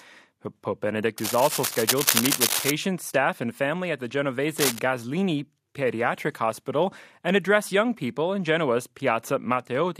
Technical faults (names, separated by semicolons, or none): cable scratch noise